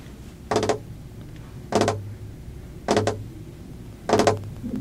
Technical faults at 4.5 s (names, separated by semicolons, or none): periodic USB or driver dropouts